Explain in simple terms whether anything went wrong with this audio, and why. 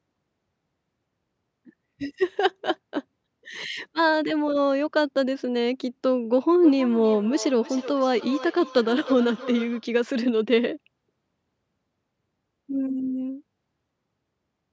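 Feedback echo between two devices, 6.62 to 9.93 s: another device replays the speech, the first microphone picks it up again, and words repeat roughly every third of a second.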